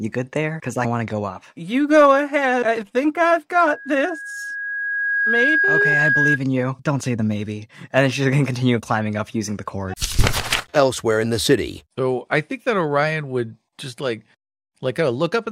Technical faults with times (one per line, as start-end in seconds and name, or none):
3.57-6.39 loudspeaker feedback squeal